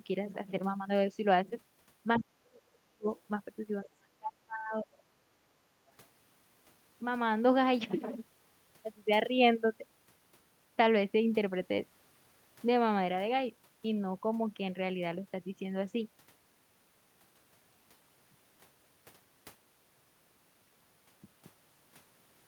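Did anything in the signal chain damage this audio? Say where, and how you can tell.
Yes. Three brief scraps of the other side's voice leaking through can be heard, at 2.15 to 2.19 s, 3.17 to 3.21 s and 3.85 to 3.89 s. They sit well under the talker, roughly 15, 35 and 25 dB down. This points to the call-processing stage: the far end was likely playing from the talker's loudspeaker back into the microphone, and the echo canceller left short residues of it in the outgoing signal.

The talker's speech also drops away twice, showing speech suppressed in double talk. From 2.19 to 3.07 s the level falls by as much as roughly 40 dB, and from 3.88 to 5.38 s by roughly 35 dB, with the voice ducking instead of carrying steadily. Both dips begin right around the leaked echo, which suggests the canceller likely saw both sides active at once, could not separate the talker from the echo, and turned everything down.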